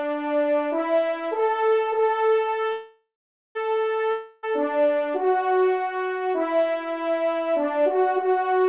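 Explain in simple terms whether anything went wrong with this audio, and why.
Yes, two things go wrong. The first is a call audio freeze from 2.72 to 3.58 s. The last sound gets stretched into a fading buzz, then about half a second of silence. The likely cause is held-up packets draining the jitter buffer. When the sound resumes, nothing's missing; it just runs about 0.83 s late from there on.

The second is a long network dropout from 4.11 to 4.46 s. Again the last sound is smeared out as a fading buzz, but this time roughly a third of a second of real audio likely never arrived, so the sound picks up further along with that chunk gone.

Throughout, the call codec keeps everything below 4 kHz, which gives the usual phone-line dullness.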